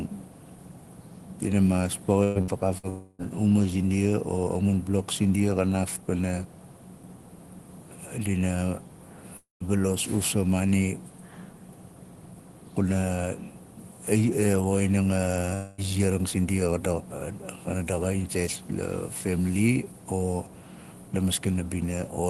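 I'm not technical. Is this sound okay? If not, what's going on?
No. Around 2.23 to 2.38, 2.41 to 2.51 and 2.78 to 2.86 seconds, the speech briefly freezes into a short buzz or hiss and then skips ahead. That is a burst of packet loss: small pieces of the call were lost or arrived too late, and the receiving end filled each gap by carrying on the last sound and fading it.

Longer gaps, each about a quarter to a third of a second, come at 2.89 to 3.22 seconds (just before "zindia o"), 9.37 to 9.63 seconds (fading into silence) and 15.54 to 15.81 seconds. This is likely a long network dropout. The connection stalled, the fill-in sound faded, and that part of the speech is missing.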